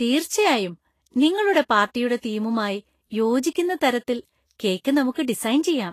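Throughout, the speech is hissy and grainy with nothing above 14.2 kHz, likely Vorbis compression coarsely quantising the treble into noise, which fits about 33 kbps.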